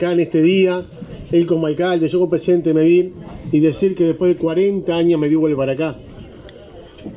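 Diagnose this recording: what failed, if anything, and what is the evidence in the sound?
Nothing failed in this recording.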